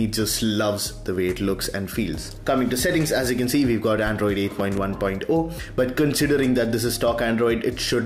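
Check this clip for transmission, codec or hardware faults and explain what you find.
Two loud pops stand out. Loud pop, 1.65 to 1.68 s: a single sharp pulse about 5 dB above the sound; loud pop, 4.6 to 4.8 s: two pulses in quick succession, about 10 dB above the sound. A sudden voltage step, likely from a plug, switch or static discharge, was added to the signal, and the following circuitry shaped it into a brief thump. The sound continues unbroken underneath each pop.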